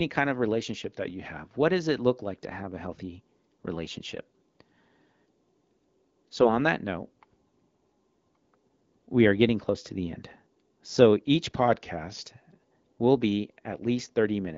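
A speech clip where a drift correction step, likely clock-matching software resetting its playback rate, slows the audio by 5.7% and drops pitch about a semitone from 0.82 to 1.39 s, just after "kind of", and again from 11.58 to 12.22 s.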